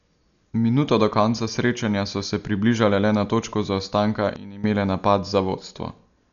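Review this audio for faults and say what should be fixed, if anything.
The encoder likely ran a low-bitrate Dolby Digital compression pass, consistent with roughly 48 kbps, starving many frequency lines of bits and filling them with noise. Throughout the speech, nothing remains above 6.9 kHz, so it sounds dull, with heavy rough, fluttering grain. Encode at a higher bitrate or keep a lossless master.

From 4.36 to 4.64 s, a sudden gain jump drops the level by about 15 dB in a single step and then returns, likely from a gain setting applied without a ramp. Speech and background noise fall and recover together. Apply gain changes through smoothed ramps rather than instant switches.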